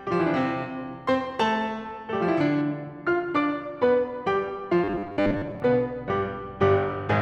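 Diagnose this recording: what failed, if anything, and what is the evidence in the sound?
From 2.61 s to the end, the music turns dull and muffled as de-emphasis is applied wrongly in the playback or processing chain. A treble-cut filter is acting on audio that needs no such correction, leaving 10 kHz about 14 dB below 1 kHz. The gentle, continuous slope separates it from a codec's abrupt bandwidth cutoff.

Between 4.84 and 5.60 s the music takes on a rigid, metallic buzz fixed at 100 Hz that still loosely tracks the material, a robotic sound from repeated short buffers. The likely cause is a driver or buffer underrun, with each 10 ms block replayed while roughly half the real audio is skipped. That steady 100 Hz pitch distinguishes it from warbly codec artefacts.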